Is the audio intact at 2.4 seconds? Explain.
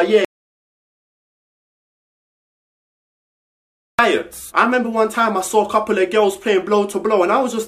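No. The input was likely lost, leaving only written silence, an audio dropout to silence from 0.25 to 3.99 s: complete silence, no room tone, then abrupt return.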